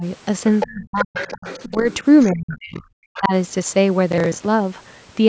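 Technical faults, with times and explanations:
0.00 s, 0.66–1.17 s, 1.71–1.87 s and 2.29–3.33 s, speech suppressed in double talk: the talker keeps dipping while the far end is talking, only slightly at 1.71 s but nearly gone around 0.66 and 2.29 s. Likely the echo canceller couldn't tell the talker from the loudspeaker echo, so it ducked everything.
0.60–2.56 s and 3.14–3.21 s, other side's voice leaking through: a second voice sits under the talker, clearly there through the long stretch and only a faint blip at 3.14 s. The echo canceller likely didn't scrub the loudspeaker playback out of the mic.
4.12–4.46 s, processor overload crackle: a third of a second of gritty tearing, because the processor kept missing buffer deadlines and replayed stale audio with hard edges each time. The rhythm points to roughly 10 ms buffers, about twenty missed.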